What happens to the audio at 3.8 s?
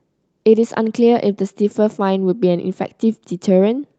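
Nothing goes wrong at 3.8 s: the speech carries straight through without a dropout, glitch or other fault, with only the steady narrowed top end of the Opus call path that runs through the whole clip.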